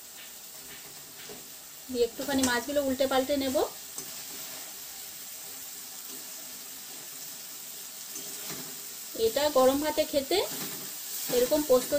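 A filter restarted on every block runs from start to finish: its state is reset at each block boundary, so every block begins from silence with a small transient. The result is a steady buzz at 172 Hz, which fits a 256-sample block, rising and falling with the sound's level.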